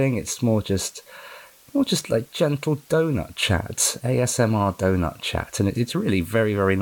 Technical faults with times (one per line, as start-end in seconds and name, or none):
0.00-6.81 low bit depth with dither